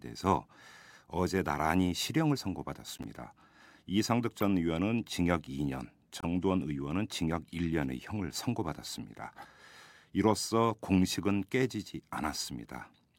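Corrupt frame decoded at 2.97–3.05, 4.40–4.43 and 6.21–6.24 s: damaged compressed frames played anyway, giving brief chirps, squeaks, blips or bursts of noise, the last louder, seen as misplaced spectral blocks.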